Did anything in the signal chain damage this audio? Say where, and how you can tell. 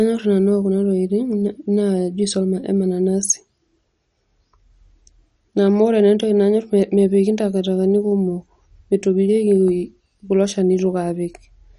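Yes. The codec stage likely applied MP2 compression. Throughout, nothing above 11.3 kHz survives and the speech turns dull and gurgling, which fits a starved rate near 48 kbps.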